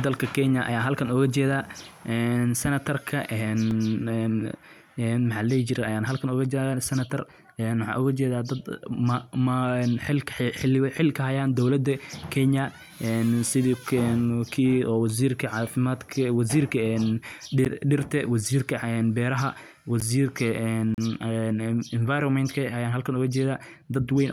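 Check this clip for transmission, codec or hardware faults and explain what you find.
The speech has four blocks of digital silence at 3.71 s, 17.65 s, 20.00 s, and 20.94 to 20.98 s. The output buffer likely went unfilled, so the sound drops straight to silence and back. The 5 ms and 11.6 ms gaps sound like ticks. The 11.6 ms length fits a 512-sample buffer. The 35 ms gap is a short hole.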